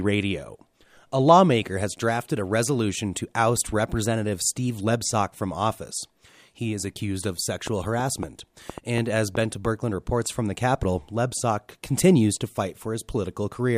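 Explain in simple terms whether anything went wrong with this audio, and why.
Between 7.67 and 9.66 seconds, about seven sharp ticks pop over the speech, at an uneven pace of roughly three and a half per second. This train of clicks is likely interference from nearby equipment or a faulty connection or power supply injecting brief pulses.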